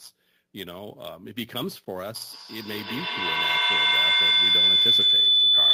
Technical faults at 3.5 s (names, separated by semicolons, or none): clock drift between sender and receiver; feedback howl